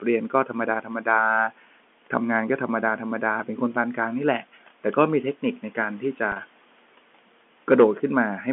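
Between 0.3 and 0.55 s, and again from 0.82 to 1.07 s, the noise suppressor mistook parts of the speech for background and turned them down, cutting speech by about 9 dB and then about 12 dB. Roughly a tenth and then a sixth of a second of sound comes out swallowed and faint.

From 6.32 to 6.36 s, 40 ms of audio was lost, which fits four 10 ms packets going missing. This is packet loss with pitch repetition: the receiver filled the gap by repeating the last pitch period, so the sound briefly holds on a buzzy note before the speech resumes. Room noise about 24 dB below the speech and the 200 Hz to 3.4 kHz telephone band of G.711 coding can be heard throughout.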